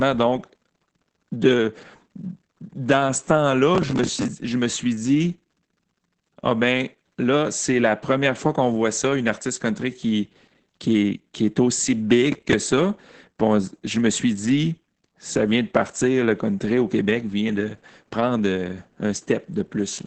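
Throughout, Opus voice compression muffles the speech. Nothing lies above 8.8 kHz. Hoarse, slightly robotic coding suggests SILK at a low bitrate, around 10 kbps.

From 3.75 to 4.28 s, between "dans ce" and "je me suis dit", processor overload crackle tears the sound. It recurs at 12.32 to 12.53 s, after "est aussi". Many short buffers, roughly 10 ms each, missed their deadlines. Stale audio filled them, giving gritty crackle.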